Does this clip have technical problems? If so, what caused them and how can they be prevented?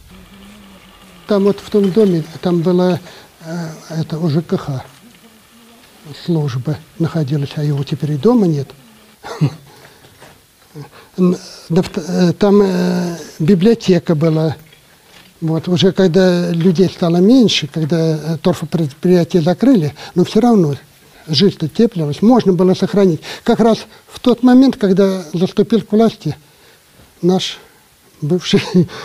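No, there are no technical faults to report, so there is nothing here that needs a cause or a preventive fix.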